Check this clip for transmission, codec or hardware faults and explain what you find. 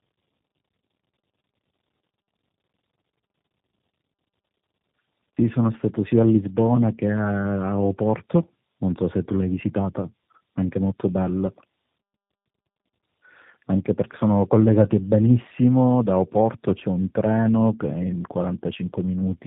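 The audio shows one fault, present for the whole clip: tandem speech coding. The call appears to have crossed several links, each with its own speech codec, so the signal was decoded and re-encoded at every handover. The character suggests three speech coders in series, ending in G.729A, with each one working on the previous one's errors. The speech sounds rough, muffled and warbly, with nothing above 3.8 kHz.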